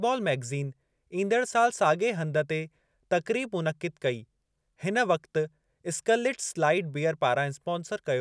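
No technical faults are audible.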